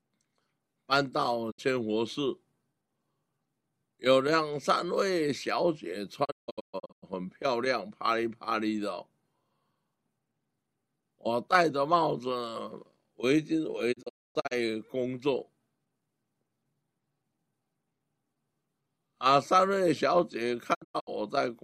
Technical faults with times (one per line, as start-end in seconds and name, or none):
1.50-1.60 digital broadcast dropout
6.23-7.04 digital broadcast dropout
13.91-14.53 digital broadcast dropout
20.73-21.09 digital broadcast dropout